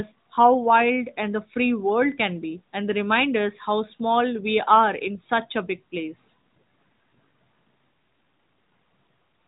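Nothing stood out on listening to this speech recording.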